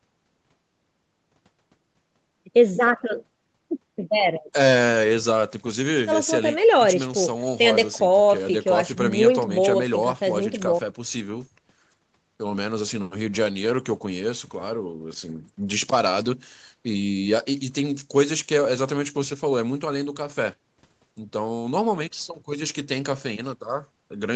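Nothing in the speech stands out as a fault: the signal has nothing above 8 kHz and carries the ordinary coding character of an Opus call path after a call's microphone processing, which is normal for audio sent over a call.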